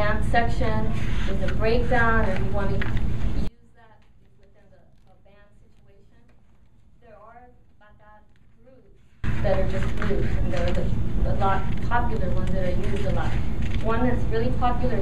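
From 3.48 to 9.24 s, one channel was likely inverted, so summing to mono cancels what both channels share, leaving only a faint residue about 31 dB quieter.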